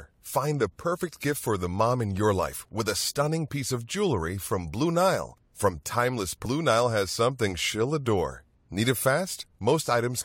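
At 6.44 s a stream segment was likely skipped after failing to load, so the speech jumps ahead abruptly with a small blip, losing a stretch of the programme.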